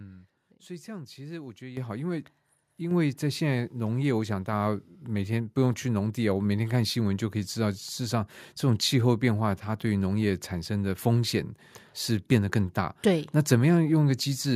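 At 1.77 s the whole sound, speech and background alike, jumps abruptly louder by about 10 dB, then again by about 5 dB at 2.91 s. This is the microphone volume stepped up: the call software judged the input too quiet and raised the device's input level in single steps.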